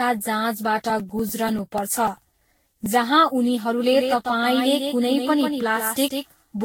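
Speech recording with three audible faults. Throughout, the audio has a swirly, hollow, smeared quality with blurred consonant attacks and nothing above 16.7 kHz. That is worse than a single lossy encode would produce, so the likely cause is generation loss, with the signal decoded and re-encoded around fifteen times. Each pass quantised on a shifted frame grid, and the noise and spectral holes built up. The character points to a Vorbis-type codec at roughly 64 kbit/s. From 0.80 s to 2.86 s, ending just before "जहाँ उनीहरूले", there is a run of regular ticks spaced 98 ms apart, about twenty in all, heard only where there is signal. Each is a gap of roughly 2 ms where audio was skipped rather than filled with silence. This is the pattern of periodic USB or driver dropouts, where a background task stalls the bus or audio driver at a fixed interval. From 3.93 s, right after "जहाँ उनीहरूले", to the end of the clip, a doubled audio track appears. 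A full-band copy of the speech trails the original by about 150 ms at about 5 dB lower. It has no decay or room colouring and switches on abruptly. The likely cause is a second capture of the same source through a slower path being mixed in, or an edit holding two misaligned copies.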